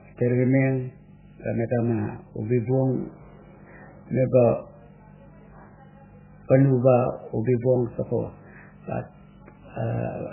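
The whole way through, the speech sounds watery and swirly, with nothing above 3 kHz, which fits heavy MP3 compression at a very low bitrate, likely around 8 kbps.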